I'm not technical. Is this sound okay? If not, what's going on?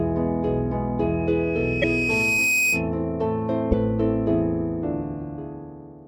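No. There are two separate problems.

From 1.00 to 2.90 s there is loudspeaker feedback squeal. A microphone is picking up the loudspeaker it feeds, and one pitch, a high tone at 2.5 kHz, keeps going round that loop and growing. It takes roughly a second and a half to swell up and ends louder than the sound it sits on. It stops at 2.90 s.

At 1.81 s and again at 3.71 s the sound briefly breaks up for about 30 ms and skips forward, a short garbled blip. This is likely a broken MP3 bit reservoir. MP3 files save space by letting each small block of audio borrow storage from the blocks before it. If blocks go missing, the next one reaches back for its borrowed data and finds the wrong bytes. Each blip lasts about one 24 ms MP3 block.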